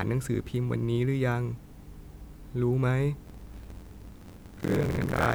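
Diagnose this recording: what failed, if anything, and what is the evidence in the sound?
Buffer tearing in the driver buffer from 3.25 s to the end: a 43.1 Hz rattle, fitting a 1024-sample buffer, with roughly half of each buffer replaying audio from a lap earlier.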